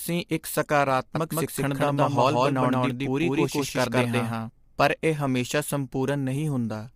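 From the start, the speech carries low-delay AAC compression, likely AAC-ELD near 32 kbps. Short frames blur harmonics, leaving plainly audible grain and nothing above 15.6 kHz. From 1.15 s to 4.49 s, just before "ਪਰ ਇਹ", there's a doubled audio track, likely from a second capture path. An equally loud, dry copy trails by about 150 ms, then stops abruptly.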